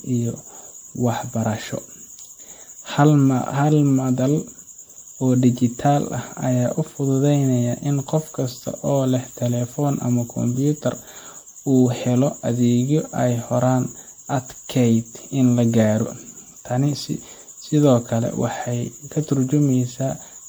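Throughout, the audio was likely re-encoded as MP3 around seven times, each pass requantising on a shifted frame grid, consistent with a 96 kbit/s chain. This generation loss stacks up noise and spectral holes, so the speech sounds swirly, hollow and smeared, with blurred attacks.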